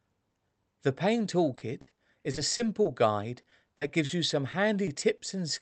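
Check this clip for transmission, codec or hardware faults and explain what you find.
Repeated packet loss (robotic sound) recurs in three stretches: 1.55–2.87 s, 3.41–4.11 s and 4.51–5.21 s. Audio keeps dropping out in short holes, longest about 60 ms, then 40 ms, then 20 ms. Each hole is bridged by stretching the preceding sound, so the speech turns choppy, with pieces missing. Unlike a single dropout, the holes arrive in quick succession, about a ninth to a quarter of each stretch concealed, audible over the call codec's band-limited, coded tone.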